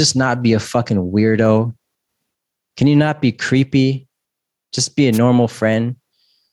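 Gain pumping runs through the whole speech clip: the gain swings by roughly 5 dB, squashing loud and soft parts closer in level, likely from excessive gain driving a fast limiter. Dropped samples give single sharp clicks at 0.6 s after "not be a", at 1.46 s after "not be a fucking", and at 3.99 s. Each is a tiny gap of about a tenth of a millisecond, likely where the waveform jumps straight to a later value. A wireless microphone noise hit from 5.12 to 5.19 s, right after "be a", is a brief swish of static as the FM radio link fades and receiver noise rises. A final dropped-sample click falls at 5.73 s.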